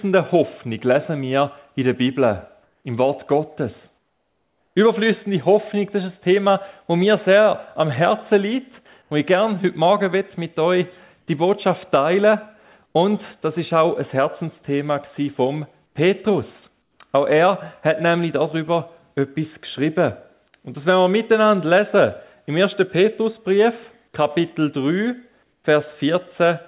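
Discontinuous transmission likely halted the sender's audio during quiet gaps, leaving comfort noise in place of the background at 2.63–2.84, 3.98–4.76, 9.02–9.11, 12.86–12.95, 15.86–15.95, 16.82–17.0 and 25.43–25.64 s. The real background turns into steady, featureless hiss, sometimes up to about 8 dB quieter. Nothing sits above 4 kHz, which fits a G.711 call path.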